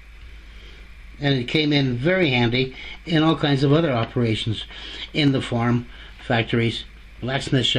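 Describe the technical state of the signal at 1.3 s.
At 1.3 s the signal is intact, with no audible fault at that point.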